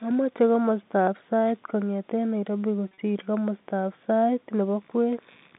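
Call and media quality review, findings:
Packet loss with pitch repetition, 2.88–2.98 s, just before "komostab sait": brief buzzy, held-pitch smear, about 80 ms lost across 100 ms, longest gap 40 ms. This points to receiver concealment repeating the last pitch period, consistent with roughly eight 10 ms packets dropped. The gaps stay short of the fade, so the sound holds rather than going silent. That tonal sustain separates it from a plain dropout or click, and it sits over the clean 150–3700 Hz G.711 A-law line band.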